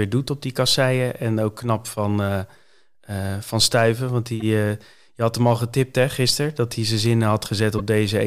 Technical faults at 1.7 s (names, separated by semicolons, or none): none